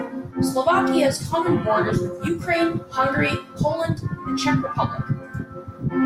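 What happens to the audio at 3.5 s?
Nothing goes wrong at 3.5 s; the speech continues intact through that moment with no dropout, glitch or distortion.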